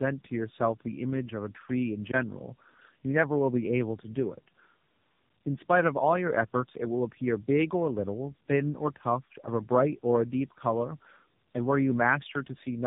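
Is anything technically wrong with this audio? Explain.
Yes, two things. The whole clip suffers from tandem speech coding, and there are two brief blocks of digital silence.

Tandem coding runs from start to finish. The speech sounds like it went through two low-rate speech codecs back to back, which fits something like G.729A at 8 kbit/s feeding AMR-NB at 7.95 kbit/s, with a plain G.711 hop in between. The second coder is chewing on the first one's artefacts, so the damage stacks up. You get a rough, warbly, muffled texture, and nothing survives above about 3.7 kHz.

The blocks of digital silence land at about 2.11 s (roughly 17 ms) and 4.03 s (roughly 7 ms). In each one a run of samples dropped to silence, most likely because the output buffer wasn't filled in time. The signal cuts out and comes back with no fade. The longer one reads as a tiny hole, and the shorter one is more of a single tick.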